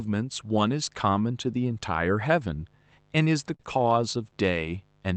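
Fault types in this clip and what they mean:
Mains buzz: A steady, raspy 50 Hz buzz with harmonics, sitting roughly 35 dB under the speech for the whole clip, from switching spikes leaking in.
Short stall from a late packet: Around 3.55 s a packet showed up late, so the last sound gets held for about 41 ms, and nothing is actually lost.
Lost packet rebuilt from error correction: Five 60 ms stretches between about 3.59 and 4.73 s were rebuilt from low-bitrate backup copies, so there's no gap but they sound rougher and noisier.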